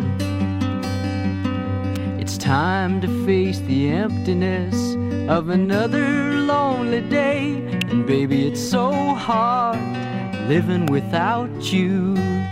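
Electrical switching spikes occur at 1.96 s, 7.81 s and 10.88 s, each a sharp snap or tight cluster of clicks lasting only a few milliseconds and peaking fairly loud, around -10 dBFS, laid on top of the underlying sound rather than replacing it. The cause is likely a nearby switch, motor or static discharge arcing briefly, with the audio line picking up that burst of electrical interference as an abrupt transient click.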